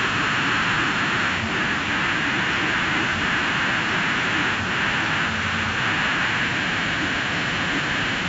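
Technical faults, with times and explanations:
The speech signal shows no technical faults; it has passed through a call's normal microphone processing, which trims only the lowest bass, and its content reaches up to 8 kHz.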